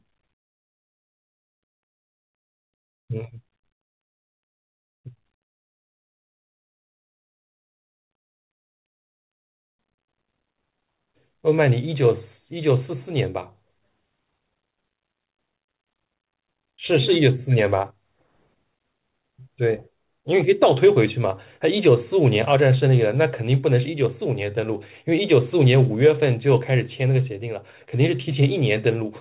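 No technical faults are audible.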